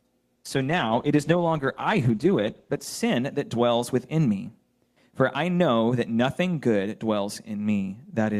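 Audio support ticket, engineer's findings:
Call bitrate drop, 0.37 to 2.97 s. Bandwidth estimate collapsed and the Opus encoder was starved of bits, which fits a fall from 96 to about 13 kbps, held for roughly 2.5 s. Result: coarse, rough, watery sound with the top end cut off, muffled until recovery near 2.97 s.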